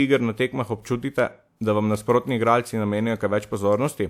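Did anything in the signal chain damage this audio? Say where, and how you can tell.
Yes, at the codec stage. Just after "iger na tekmah", from 0.82 to 0.85 s, a short hiss runs ahead of a sharp attack in the speech. The attack sounds soft or smeared. This is pre-echo. A transform codec spreads quantisation noise across a whole block. Here the attack fell late in its block. Noise sized for that loud onset leaked back about 29 ms into the quiet moment before it.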